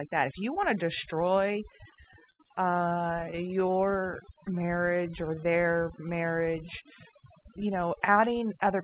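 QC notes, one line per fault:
Throughout, overdone noise removal: the noise reduction works too hard, pulling individual frequency bands far down or out whenever they sit close to its noise estimate. Low-level parts of the speech are lost along with the noise, so pauses fall to near silence scattered with twinkling specks. The band already ends at about 4 kHz, as expected on a 64 kbps G.711 A-law call path.
1.72 to 3.94 s, repeated stalls (stutter): the jitter buffer ran dry over and over, giving more than thirty short stalls across this span. Each time, the receiver stretched the last sound to bridge the wait, fading it on the longer ones, with the longest lasting about 71 ms. About 380 ms in total, 17 percent of the span, is filled this way, and none of the speech is lost. The speech drags and stutters rather than dropping out.
4.06 to 5.42 s, jitter buffer slow-down: the buffer was low, so the receiver rebuilt its reserve by repeating single pitch periods and slivers of pauses many times in succession. 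This adds 153 ms and slows playback to 89 percent of normal speed without shifting pitch. Sounds are drawn out and the delivery feels sluggish, and the repeated periods can leave a faint warble in sustained sounds.
7.37 to 8.74 s, jitter buffer speed-up: the buffer held more audio than its target, so the receiver trimmed short pieces of one or a few pitch periods, repeatedly, to bring the delay down. Roughly a tenth of a second is removed, and playback runs at 108 percent of normal speed with unchanged pitch. The speech sounds hurried toward the end of the clip.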